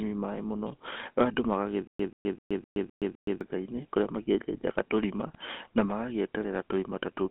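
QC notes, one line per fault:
Throughout: GSM full-rate codec. The sound is confined to a narrow line band of roughly 250 Hz to 3.5 kHz, so it is thin and lacks both low body and high air. The damage is plainly audible as a buzzy, gravelly roughness. This fits the 13 kbps full-rate coder. It models the vocal tract and drives that model with a sparse, regularly spaced pulse excitation. Fine detail between those pulses is simply discarded.
1.87–3.41 s: stutter with silent gaps. A short burst of about 135 ms repeats six times. Each repeat is followed by about 121 ms of digital silence, giving a steady cycle of roughly 256 ms. Normal playback then resumes just before "kũrĩa makĩenjejaga tũrima na". The likely cause is a stalled stream replaying its last buffered fragment at each retry, then running dry. Whatever should have played during that stretch is lost.
5.34–5.36 s: GSM bit errors. Right after "kũrĩa makĩenjejaga tũrima" there is a brief squawk and pop lasting about 20 ms. 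The error rate is about 1.5 percent. The sound points to a couple of corrupted decoder frames. Flipped bits in the filter, pitch or gain values bent the spectrum and level for that instant, so the decoder produced a gargled burst instead of clean output.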